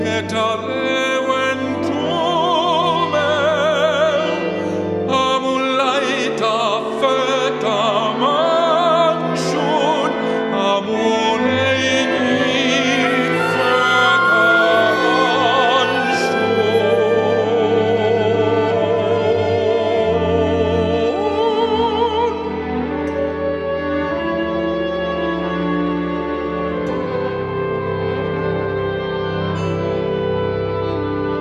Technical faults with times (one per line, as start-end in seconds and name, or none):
none